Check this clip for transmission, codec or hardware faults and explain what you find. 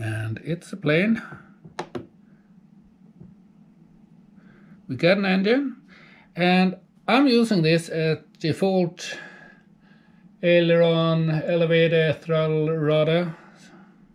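No faults found.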